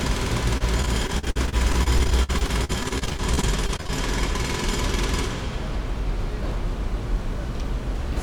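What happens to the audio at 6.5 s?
Nothing goes wrong at 6.5 s; the audio is intact at that moment.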